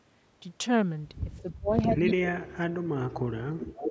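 At 1.38–1.42 s a faint delayed copy of the speech appears, about 35 dB down and trailing by roughly 340 ms. This is an echo leak, likely from a loudspeaker-side echo canceller passing residual pickup back. From 1.42 to 1.79 s the speech dips by roughly 30 dB. This is speech suppressed in double talk, likely the canceller turning down its own talker along with the loudspeaker echo while the far side's sound was playing. The pattern repeats at 2.05–2.68 s, with another dip of roughly 30 dB. Inside it, at 2.06–2.13 s, a louder echo sits about 15 dB below the speech, with a 342 ms delay, likely the same leak. From 3.44 s to the end the speech drops by roughly 25 dB, likely double-talk suppression again. From 3.66 s an echo only about 5 dB down, delayed 351 ms, likely leaks through and runs to the end. The band stops at 8 kHz.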